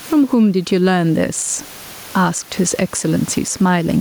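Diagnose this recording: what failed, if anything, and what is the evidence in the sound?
The gain swings by around 15 dB, and the speech sounds squashed throughout. That's gain pumping, likely from input gain set far too high with a fast limiter in the call processing clamping every peak. The room noise, about 33 dB under the speech, is part of the recording.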